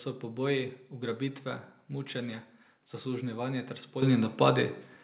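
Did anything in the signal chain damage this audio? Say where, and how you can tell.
Yes. The damage is at the call-processing stage: the microphone volume stepped up at 4.02 s. Speech and background jump together by about 10 dB in one step. That points to the call software raising the device input gain, not a louder talker.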